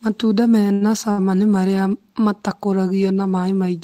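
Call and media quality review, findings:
Short stall from a late packet at 0.73–0.84 s and 1.11–1.21 s, before "nĩ marĩa". Jitter buffer underrun. Speech held about 75 and 64 ms. Nothing lost.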